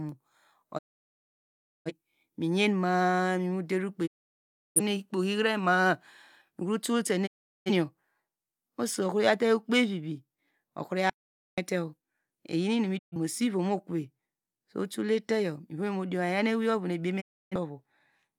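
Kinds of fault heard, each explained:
Digital broadcast dropout: Five times, at 0.77, 4.06, 7.26, 12.97 and 17.20 s, the speech fades out over about 20 ms into silence for between 0.13 and 1.07 s. The receiver muted while frames were lost or failing their checksum, then resumed on good frames.
Audio dropout to silence: At 11.10 s the speech cuts off abruptly, with no fade, into complete silence for about 0.48 s, with no room tone beneath, then comes back mid-flow. The likely cause is lost input while the recorder kept writing silence.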